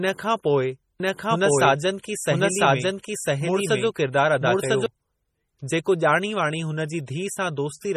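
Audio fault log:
throughout, MP3 compression: heavy watery, swirly artefacts and nothing above 15.9 kHz, likely from a low bitrate near 32 kbps; unlike plain filtering, weak detail flickers.
1.00 to 4.86 s, doubled audio track: a full-band copy about as loud follows roughly a second behind, likely a second capture, starting and stopping abruptly without reverb's decay.
2.03 s, pre-echo: a hiss spread over 16 ms comes just before an attack, quantisation noise leaking backward within a codec block, softening the onset rather than clicking.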